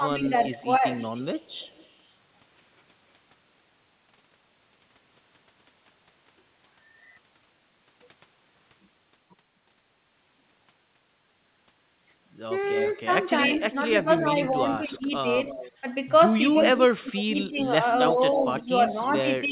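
From 0.0 to 0.84 s, 13.05 to 15.27 s, at 15.81 s and from 16.54 s to the end, speech is suppressed in double talk. The voice dips by about 10 dB, and by about 30 dB in the final stretch. The likely cause is the echo canceller ducking it against the other talker, unlike random dropouts.

From 0.37 to 2.11 s, 12.62 to 13.26 s, 13.88 to 15.72 s and 16.57 to 19.08 s, there is echo leak. A repeat trails about 0.3 s behind, at about 25 dB down at first and rising to about 10 dB below. This is likely loudspeaker pickup that the canceller missed, and its steady delay distinguishes it from reverb.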